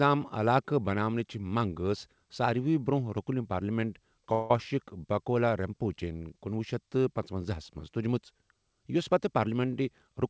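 A speech recording carried over a G.722 call path whose sound stops at 8 kHz, it has a brief buzzing or hissing hold from 4.33 to 4.51 s, about 170 ms long, after which the speech resumes intact but later. This is a call audio freeze, likely from delayed packets draining the jitter buffer. From 9.39 to 10.24 s the speech sounds slightly rushed at unchanged pitch, running at 107% speed. This is a jitter buffer speed-up trimming pitch periods, removing roughly 70 ms to cut the built-up delay.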